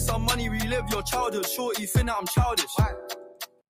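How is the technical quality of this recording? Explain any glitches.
The recording has two faults, both from the same source.

Throughout, a noise suppressor applied to music or sounds, built for speech, keeps treating steady tones and tails as noise, so the level swings by around 5 dB. The sound pumps and thins, and a waveform shows an envelope that breathes between attacks, with held energy dimming on a spectrogram.

From 3.13 to 3.62 s, the sound is cut by the noise suppressor. It judged this stretch to be noise and pulled it down by about 21 dB at its deepest for roughly half a second. The waveform collapses sharply there, and the spectrogram goes dark across the band.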